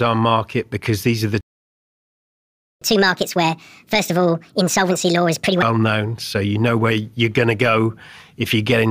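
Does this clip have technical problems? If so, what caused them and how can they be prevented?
Yes. A playback stall runs from 1.41 s to 2.82 s: the speech cuts out mid-flow and the output sits silent for about 1.4 s before resuming. The likely cause is the player running dry of buffered data, or its audio thread being blocked, so nothing reached the output until it recovered. Keeping a deeper playback buffer and running audio on a high-priority thread that never waits on network or disk would prevent it.

Catch-up at higher speed follows from 2.82 s to 5.62 s, where the player drains its backlog by resampling at 1.5 times normal speed. Because resampling changes speed and pitch together, the speech sounds hurried and raised by roughly seven semitones, giving a chipmunk-like quality, then drops back to normal once the lost time is recovered. Using time-stretching that preserves pitch, or a gentler catch-up rate, would prevent it.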